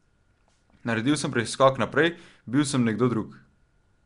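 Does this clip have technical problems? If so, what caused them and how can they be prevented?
Yes. The whole clip was likely passed through Nellymoser Asao compression, the old Flash microphone codec, at a rate that fits about 44 kbps. It codes short blocks with a fixed, small bit budget, so weaker bands get no bits and are refilled with noise, and nothing survives above 10.6 kHz. The speech carries a plainly audible rough, hissy halo and a smeared, underwater quality. Recording or streaming with a modern codec such as Opus at an adequate bitrate would prevent it.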